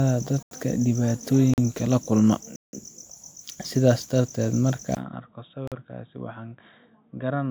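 Speech with three kinds of fault. A swirly, hollow smear and softened consonant attacks run through the whole clip. This sounds like generation loss, likely from a few successive WMA encodes at around 128 kbit/s. On a spectrogram, the content reaches about 20.1 kHz but shows scattered holes and blurred onsets. Blocks of digital silence cut the sound abruptly at 0.43 s (85 ms), 1.54 s (43 ms, just before "la kulma"), 2.56 s (171 ms, just after "la kulma") and 5.68 s (43 ms). The waveform drops to a dead-flat line with vertical edges, and the lengths step in powers of two, which fits buffers not being filled in time. From 4.95 s to the end the sound turns dull and boxy after a 20 ms dropout. This is an input switched to a poorer device, likely a different microphone or headset. The level falls by about 10 dB, and a new low noise floor appears well below the signal. The spectrogram shows everything above 3.8 kHz cut away from that point.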